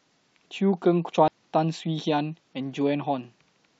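Compressed frames skipped in this speech clip: at 1.28 s the decoder drops about three whole frames, missing or rejected as damaged. The speech jumps ahead by about 0.3 s, which fits three 92.9 ms frames.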